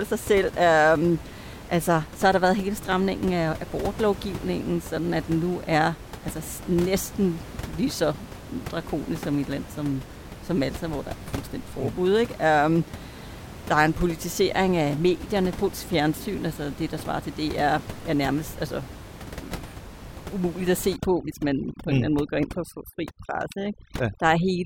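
Overdone noise removal from 20.96 s to the end, just after "umuligt at": an over-strong noise reducer cuts bands near its noise estimate, leaving the room noise dropped and broken into twinkling specks.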